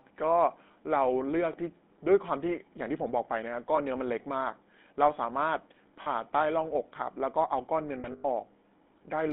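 Speech carried throughout by the GSM full-rate codec. The band runs only from 200 Hz to 3.6 kHz, and the voice has a plainly audible buzzy, gravelly grain. That grain separates it from simple telephone band-limiting, which would sound muffled but smooth. It comes from the coder rebuilding the voice from a vocal-tract model driven by a sparse, regular pulse train, which fits the 13 kbps full-rate scheme. There are also lost GSM frames at 3.76–3.79 s, 6.02–6.07 s and 8.0–8.25 s. The first is short enough to fit a single 20 ms frame, and the second about 40 ms. The last is a scattered stretch whose longest run is around a tenth of a second. Each time, the decoder repeated the last good frame's settings, so the sound hangs as a rough, metallic ring. Unlike a dropout, which leaves silence, or a glitch, which leaves a click, the sound here is held and smeared.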